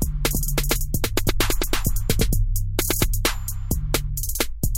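From 0.34 s to 2.30 s the audio is heard twice, with a second full-band copy trailing about a third of a second behind at roughly the same loudness. It has no decay or room colour and cuts in and out abruptly. This doubled audio track likely comes from the sound being captured again through a slower path.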